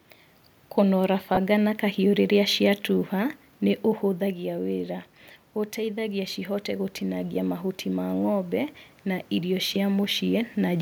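Right around 1.35 to 1.37 s you get lost LE Audio frames: about 22.5 ms dropped, which fits three 7.5 ms frames. The LC3 decoder fills the hole by repeating the last spectrum with scrambled signs, so the sound briefly goes to a noisy smear.

From 5.75 s to 10.77 s the automatic gain is rising. The input had fallen by about 9 dB, and the AGC slowly climbs about 6 dB to compensate, so voice and room noise swell up together. That's separate from the talker moving around 4 s.

Another short frame loss hits at 9.74 s: 15 ms gone, which fits two frames, concealed the same way as a quick smeared blip.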